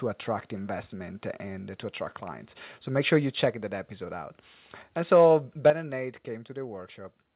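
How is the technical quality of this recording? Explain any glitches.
The recording has two kinds of fault: sudden level drops and clipped peaks. The audio also passed through a G.711 A-law call path at 64 kbps, so nothing is present above 4 kHz, which gives the narrowband telephone character.

Microphone volume stepped down: At 3.51 s, between "make sure you" and "that episode out", the voice and background fall by about 3 dB in a single step. At 5.70 s they fall again, this time by about 9 dB. The likely cause is the call software reducing the device's input volume after judging it too loud. Because the gain changed at the input stage, the background noise drops along with the voice.

Microphone overload: From 5.13 to 5.27 s the signal tops are flattened, with peaks driven about 2 dB past the converter's limit and a few percent of samples clipped. From 5.66 to 5.70 s this happens again at about 4 dB over, with several percent of samples clipped. 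The likely cause is an input volume set too high. Cutting off the waveform tops adds a crackling distortion to those peaks. The second overload ends exactly where the 9 dB step-down begins, which fits the software reacting to it.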